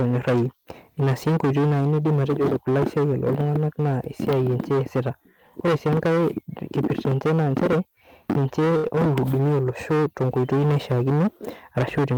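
The speech is hard clipped throughout, driven about 17 dB past full scale so that roughly a fifth of the samples are cut flat. The waveform shows squared-off plateaus on the peaks, and the spectrogram shows harmonic energy smeared high up on every loud syllable, heard as a harsh fuzz. Between 8.77 and 8.96 s there is a short stall from a late packet: the receiver held the last sound for about 71 ms and then resumed without losing anything, pushing everything after it later by about 71 ms. It appears as a flat horizontal streak in the spectrogram and a repeated stretch in the waveform, with no gap.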